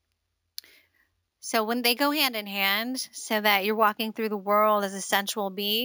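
Imaging from sample-and-hold upsampling runs through the whole speech clip. The audio was raised from 16 kHz to 48 kHz by holding each sample for three output samples, with no smoothing filter afterwards, so mirrored copies of the spectrum sit above the original band. The first image fills 8 to 16 kHz at about 14 dB below the signal, heard as a bright metallic fizz that rises and falls with the speech and slides opposite to its pitch.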